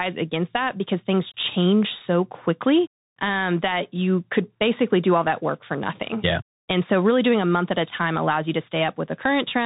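From start to end, the speech carries the sound of a Bluetooth CVSD headset codec, consistent with a 64 kbps stream. CVSD codes each sample as a single up-or-down bit and adapts its step size, so nothing above 4 kHz survives and the audio sounds narrow and boxy. Loud, bright passages outrun the step size and distort, s sounds come through scratchy, and a granular hiss sits beneath the speech. The damage is plainly audible throughout.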